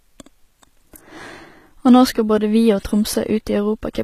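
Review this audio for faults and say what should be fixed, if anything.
The speech appears to have gone through a low-bitrate encoder, likely HE-AAC compression, whose damage is plainly audible throughout. Only the lower spectrum is properly coded; the treble is rebuilt by copying lower bands upward under a coarse envelope, which fits a budget near 20 kbps. The rebuilt top end doesn't line up harmonically with what lies below, so sibilants sound gritty and metallic, and nothing remains above 14.9 kHz. Encode at a higher bitrate, or keep an uncompressed master.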